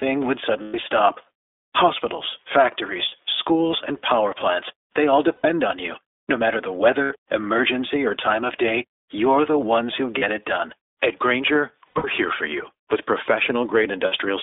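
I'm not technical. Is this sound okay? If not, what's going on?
No, not quite. The whole recording went through the iLBC codec, a phone-style voice compressor that strips out the higher tones and leaves the speech sounding thin, slightly rough and a bit synthetic.

There are also seven short blips from lost iLBC frames, where bits of the audio went missing and the decoder filled the hole by stretching the last sound into a brief buzzy, breathy hum. They happen at 0.62 s, 3.08 s, 5.36 s (right after "power plants they all"), 7.04 s (after "matter the"), 10.18 s, 11.88 s (just before "here for you with") and 14.06 s. Each lasts only 40 to 140 ms, and the speech snaps back straight away.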